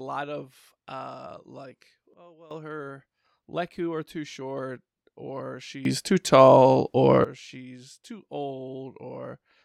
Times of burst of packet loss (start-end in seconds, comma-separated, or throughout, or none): none